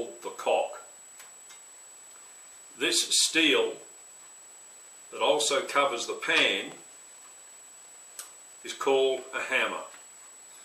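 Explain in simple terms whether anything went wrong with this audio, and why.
Nothing went wrong here: the audio runs along without a single hiccup, dropout or glitch you'd need to worry about.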